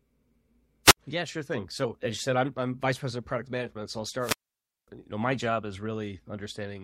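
At 0.84 to 0.97 s, and again at 4.19 to 4.88 s just before "you know my job", hiss swells and the speech cuts to near silence for 63 ms, then 554 ms: a wireless microphone squelch dropout, where the fading radio signal made the receiver mute its output.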